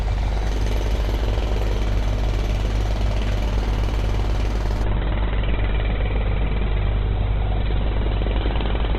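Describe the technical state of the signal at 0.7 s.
At 0.7 s the signal is intact, with no dropout, clipping, distortion or other fault in the sound at that moment.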